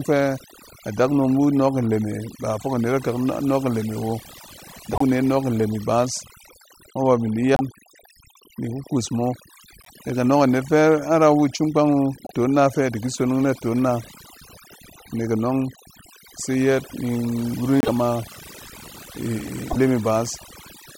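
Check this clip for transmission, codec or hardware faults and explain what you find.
Two problems here. Overdone noise removal runs the whole way: the noise reducer was set too hard, zeroing bands near its noise estimate, so the background drops and breaks into twinkly specks. Then there are short glitches at 4.93–5.02 s, 7.54–7.61 s after "bin di", 9.81–9.89 s after "iku kuus mo", 12.24–12.31 s just before "na fɛ diki sonong", 17.80–17.89 s and 19.69–19.77 s. The sound skips ahead with a brief chirp or noise burst, roughly three 26.1 ms frames long. That's likely a broken MP3 bit reservoir, where dropped frames leave the next ones reading the wrong data.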